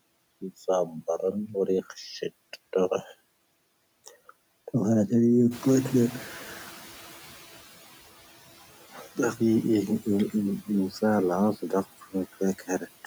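Noise suppressor artifacts run through the whole recording. The suppressor pulls down every band it judges to be steady background, by about 13 dB, and it decides frame by frame, so the noise floor drops in the gaps between words and swells back up beneath them.

At about 5.5 s the room noise, which is part of the recording rather than a fault, jumps by about 12 dB. From 5.51 to 7.44 s the noise suppressor is catching up. Its noise estimate lags the new level, so the louder background comes through with little reduction at first and then sinks steadily as the estimate adapts over those 1.93 s, reaching a cut of about 10 dB. After the rise, the noise sits about 20 dB below the speech.

From 8.94 to 9.18 s, speech is cut by the noise suppressor. It misreads part of the speech as noise and attenuates it with the background, by up to about 8 dB. The affected portion totals roughly a tenth of a second, so a brief piece of speech sounds swallowed or faint.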